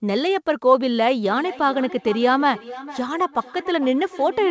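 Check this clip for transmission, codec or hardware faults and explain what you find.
There is one fault: feedback echo between two devices, running from 1.29 s to the end of the clip. The speech is band-limited with nothing above 8 kHz, which points to a wideband call codec such as G.722.

From 1.29 s, the speech returns roughly every half second. Two devices in the same room are on the call. One plays the other's incoming audio, and that microphone picks it up and sends it back. Neither echo canceller can remove sound from the other device's loudspeaker. Each pass sounds thinner and more ringing, peaking at about 16 dB below the direct speech.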